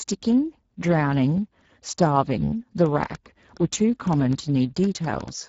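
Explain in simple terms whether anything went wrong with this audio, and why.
The speech has been squeezed through the Speex codec, an older low-bitrate voice codec from internet calling and game chat. It had too little data to describe the voice accurately, so the damage is plainly audible as a rough, noisy, hoarse quality throughout, with nothing above 7.7 kHz.

A train of clicks runs from 2.86 s to 5.29 s: roughly ten sharp ticks at an uneven pace, about 4.5 per second, louder than the speech and audible in pauses too. The likely cause is electrical interference or a faulty connection injecting pulses.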